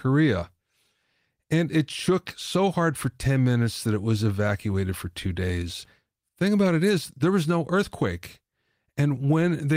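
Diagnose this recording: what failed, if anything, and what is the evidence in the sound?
Nothing failed: the recording carries no audible evidence of a fault at any stage.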